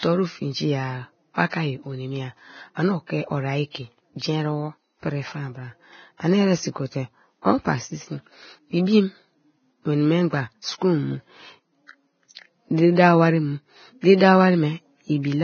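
From start to finish the speech carries heavy lossy-coding damage, most likely Vorbis compression at a very low rate. Nothing is left above 6.5 kHz, and the treble that remains sounds hissy and grainy. The detail that should be there is replaced by noise of similar loudness, which fits a bitrate of around 17 kbps. That grainy hiss separates it from a simple low-pass filter, which would leave the band below the cut-off clean. The speech also sounds rough, and its consonant attacks are smeared.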